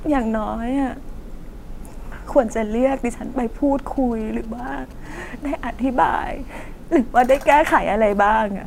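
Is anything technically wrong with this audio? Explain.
Yes. From 3.97 to 5.07 s a galloping dit-dit-dit of short 217 Hz buzzes, roughly 25 dB below the speech, reveals GSM signalling bursts: a nearby 2G phone's radio pulses rectified by the audio circuit. From 5.11 to 6.63 s a steady, raspy 217 Hz buzz rich in harmonics, about 33 dB below the speech, is GSM phone buzz from a nearby 2G phone transmitting in bursts 217 times a second during a call.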